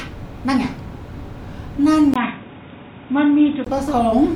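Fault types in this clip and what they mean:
Input switched to a poorer device: after a 20 ms gap the speech turns dull and boxy, nothing above 3.8 kHz, likely from another microphone.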